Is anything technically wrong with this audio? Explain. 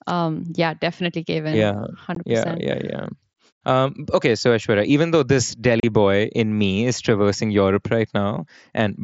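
Yes. Unconcealed Bluetooth headset packet loss hits at 2.15 s (15 ms) and 5.80 to 5.83 s (30 ms). Voice packets between headset and phone were lost and nothing replaced them, so the speech drops to hard-edged silence that can click. Concealed loss would instead fill the gaps with repeated or smeared sound.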